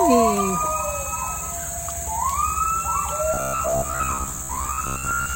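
The audio turns robotic from 3.34 s to 5.35 s. This is robotic sound from repeated short buffers. A rigid, metallic buzz near 66.7 Hz follows the original only roughly. Roughly half the material is repeated. The likely cause is audio arriving too slowly, so 15 ms fragments are replayed.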